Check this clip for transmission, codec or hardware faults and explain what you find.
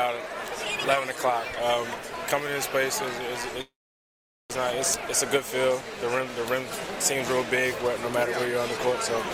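A call audio freeze occurs from 3.61 to 4.51 s. The last sound trails off as a brief fading buzz, then about 0.8 s of silence. Playback resumes where it stopped, nothing lost, now 0.88 s late, likely from delayed packets draining the jitter buffer.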